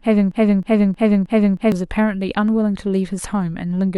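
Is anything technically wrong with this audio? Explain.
Yes. From the very beginning of the clip until 1.72 s there is a broken-record loop that is already running when the audio starts. The player, encoder or stream has likely stalled and kept resending the last fragment it held. As a result, a 0.31 s slice of speech plays four times back to back, identical on every pass. The speech that belonged in that stretch is lost.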